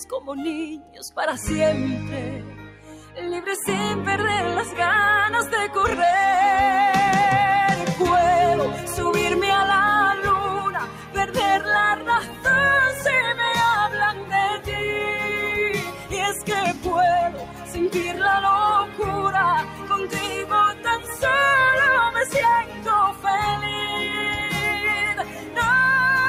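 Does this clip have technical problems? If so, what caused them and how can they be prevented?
Yes. Throughout, the sound pumps and thins: held tones and tails sag while attacks stay fairly intact, with the level swinging by around 10 dB. This is a noise suppressor applied to music or sounds. A suppressor tuned for speech treats anything steady, such as sustained tones, ambience or reverb, as noise and pulls it down, while transients get through. To prevent it, disable the noise suppressor or switch the input to a music or original-sound mode before recording.

In seven places the sound sinks audibly further, with decays cut short: 0.2–1.1 s, 2.43–3.17 s, 10.66–13.05 s, 14.13–14.76 s, 15.78–21.23 s (the longest, with about three seconds affected in total), 22.26–23.26 s and 25.18–25.57 s. The drops reach about 9–10 dB. This is sound cut by the noise suppressor: the processor judged these sustained passages to be noise and attenuated them harder than the rest. 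To prevent it, keep suppression off or set to its lowest setting for non-speech material.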